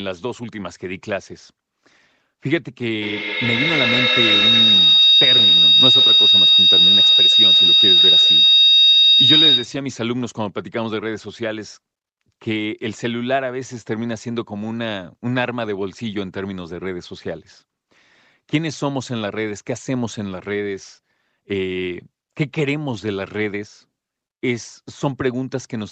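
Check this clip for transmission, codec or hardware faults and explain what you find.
There is one fault, a feedback howl running from 3.02 to 9.87 s, heard through a call path whose audio stops at 8 kHz. A microphone and loudspeaker sharing a room on the same call form a loop that adds level on each pass, so the sound narrows to a whistle near 4 kHz, with the loop repeating roughly every 150 ms and peaking about 10 dB above the speech. On a spectrogram it shows as a bright horizontal line near 4 kHz; on the waveform, as swelling amplitude.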